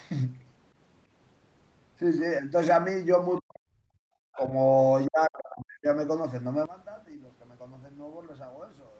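From 3.4 to 4.01 s the speech falls away sharply, sinking about 40 dB. This is likely speech suppressed in double talk. The echo canceller could not tell the near talker from loudspeaker echo, so it turned everything down.

From 4.33 to 4.45 s a faint second voice sits under the speech, about 30 dB down. This is likely the other side's voice leaking through. The echo canceller left some loudspeaker sound in the microphone signal. At the same time, from 4.36 to 4.46 s, the speech dips briefly by about 10 dB. That shallow dip is likely a short case of double-talk suppression.

From 5.07 to 5.86 s the speech is suppressed again and drops by about 40 dB. It sounds much like the first cut. The canceller likely treated both talkers as echo and suppressed them together.

From 6.66 s to the end the level drops by about 19 dB, and the speech turns faint. This points to one channel inverted. Its reversed polarity cancels the centred speech when the channels are summed to mono, and only their small difference remains. 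The likely cause is a polarity flip.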